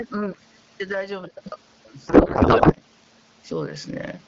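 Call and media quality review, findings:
Gain pumping throughout: level swing about 15 dB, dynamics squashed. Likely input gain set too high, with a fast limiter/compressor clamping every peak.

Codec payload misread, 2.07 to 2.73 s: speech replaced by garbled noise and warble barely tracking it. AMR-WB decoder parsing frames with misplaced fields; points to octet-aligned payload read as bandwidth-efficient. Clears once the formats realign.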